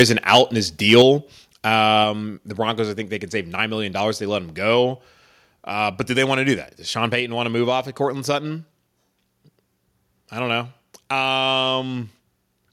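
Speech with microphone overload at 0.00–0.02 s, 0.29–0.41 s and 0.89–1.02 s: peaks driven about 6 dB, then about 4 dB, past full scale have flattened tops, which is likely from excessive input gain and gives a harsh crackle. A microphone volume stepped down event follows at 0.02 s (about 2 dB) and again at 1.02 s (about 4 dB), with speech and background dropping abruptly, likely the call software cutting input gain after detecting clipping.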